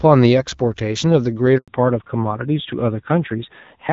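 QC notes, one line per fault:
1.58–1.68 s, handover gap: the sound dies away within a few tens of milliseconds and stays silent for 100 ms while the call switches networks and no frames arrive. The waveform falls to a flat line, and the spectrogram shows a clean vertical blank band across all frequencies.
1.68 s to end, fallback to narrowband: right after the gap, everything above 4 kHz disappears and the sound turns duller and rougher. This points to a drop from the AMR-WB HD Voice link, which up to then carries content up to about 7 kHz, to AMR-NB at around 7.4 kbit/s. The spectrogram shows a hard ceiling at 4 kHz from this point on.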